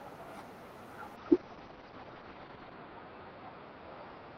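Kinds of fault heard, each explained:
Call bitrate drop: From about 1.16 s the speech turns rough and muffled, losing its crispness and air, and it stays that way to the end without recovering. The call's bandwidth estimate fell, so the encoder was pushed from 32 kbps down to 7 kbps and held at that floor for about 1.6 s. At that rate it codes much more coarsely and cuts the audio band from 20 kHz to 6 kHz.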